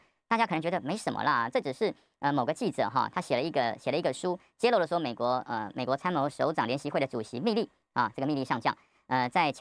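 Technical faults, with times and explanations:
Throughout, wrong sample rate: the speech runs about 1.38 times too fast and sits about 5.55 semitones higher, with tempo and pitch raised by the same ratio. That locked pairing is what separates it from a pitch shifter or time-stretch, which alter one without the other. Vowel resonances climb along with the pitch, giving a thin, hurried quality. The ratio fits audio captured at 16 kHz but played back at 22 kHz without conversion.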